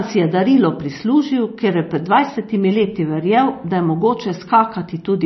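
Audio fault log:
Throughout: MP3 compression. Nothing is heard above 5.9 kHz, so the speech sounds dull and boxed in. What remains has a watery, swirling quality. S sounds come out metallic and chirpy. Consonant onsets smear instead of landing cleanly. The likely cause is an MP3 encoder that was short of bits. It cut the treble at a fixed point and let weak frequency lines flicker on and off between frames. The heavy damage fits a low bitrate near 26 kbps.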